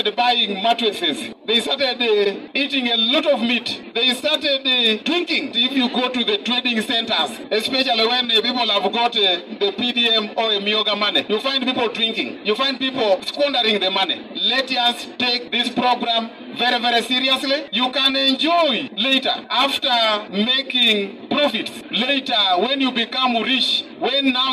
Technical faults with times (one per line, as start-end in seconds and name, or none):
0.95-0.99 repeated frames
2.23-2.29 repeated frames